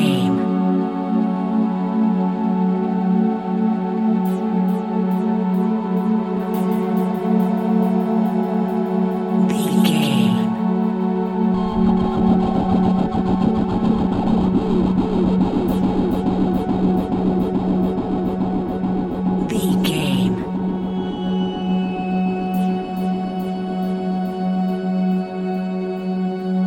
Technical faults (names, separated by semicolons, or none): doubled audio track